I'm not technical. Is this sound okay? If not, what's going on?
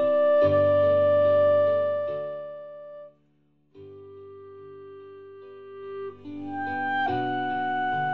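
Yes, nothing is wrong here.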